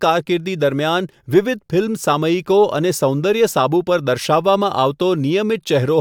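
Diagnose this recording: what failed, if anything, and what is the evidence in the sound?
Nothing in the speech recording points to a failure at any stage, from capture and conversion through transmission, storage and playback.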